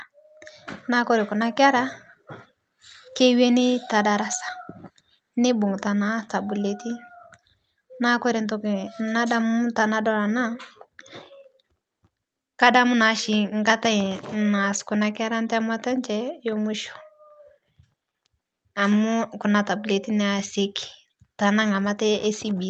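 A speech clip with nothing technically wrong with it to point to, at any time.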